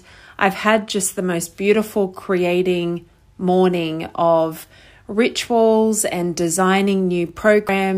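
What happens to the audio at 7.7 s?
At 7.69 s, compressed frames are skipped: a run of coded frames either never reached the decoder or was rejected as damaged, so about a tenth of a second of the speech is dropped and playback jumps ahead. The join is heard as an abrupt jump in the speech.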